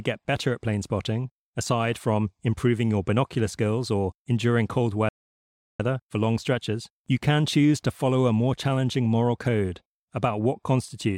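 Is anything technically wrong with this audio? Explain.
Yes. A playback stall cuts the speech from 5.09 to 5.80 s, right after "skills or enduring cold", and it resumes with "for long stretches you". The player likely ran out of data or was blocked, so output went silent for about 0.71 s. The waveform shows a flat line there, and the spectrogram shows a blank vertical band.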